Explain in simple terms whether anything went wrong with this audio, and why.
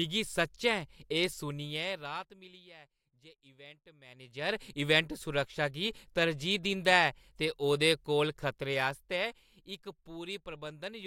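Between 8.43 and 9.96 s there is zipper noise. The speech gets noticeably quieter, but the volume drops in small jumps, about forty a second, instead of gliding down. Each jump makes a tiny click, so together they sound like a fast ticking or zipping.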